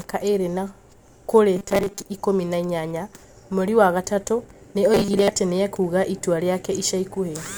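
Robotic sound from repeated short buffers hits this speech clip at 1.56–2.02 s and 4.94–5.29 s: a rigid 200 Hz metallic buzz, likely a 5 ms chunk looped over most of the missing audio.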